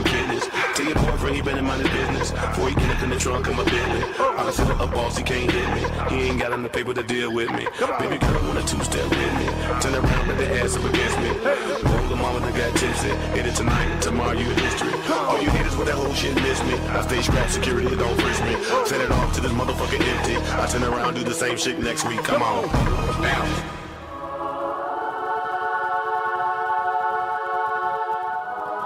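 The player began this adaptive stream on a low-bitrate version to start quickly, then switched to a better one at 6.0 s once it had gauged the connection. From 0.0 to 6.0 s the treble is thin and partly synthetic, with stronger codec smearing, which fits an Opus encode around 24 kbit/s. At 6.0 s the quality lifts abruptly with no gap, consistent with a step up to roughly 64 kbit/s.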